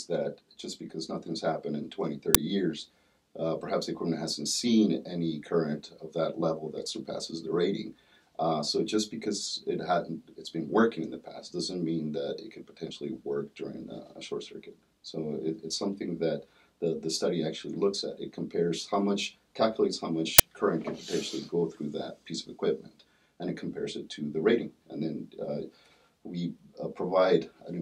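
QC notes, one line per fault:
2.35 s and 20.39 s, uninitialised buffer: short, loud bursts of digital noise, about 5.8 ms and 11.6 ms long, which fits one 256-sample and one 512-sample block. Leftover memory was played as samples. Unlike a dropout, the gap holds loud noise, not silence.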